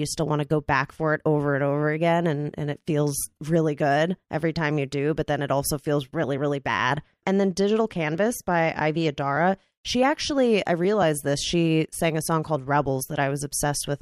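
No technical faults are audible.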